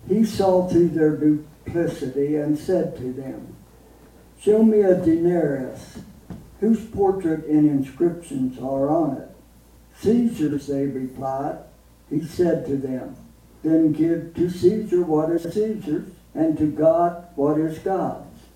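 The audio has three brief bursts of frames out of order, at 4.06–4.26 s, 10.47–10.58 s and 15.37–15.52 s. In each, two adjacent blocks of about 93 ms, 46 ms and 70 ms play with their order swapped, which fits runs of four, two and three frames. The result is a garbled flutter. Unlike a dropout or a repeat, no time is lost and nothing is duplicated.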